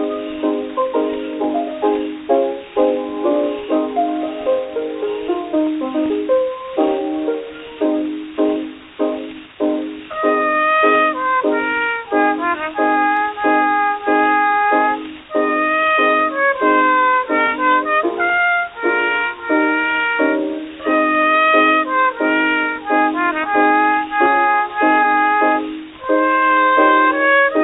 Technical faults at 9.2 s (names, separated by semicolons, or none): none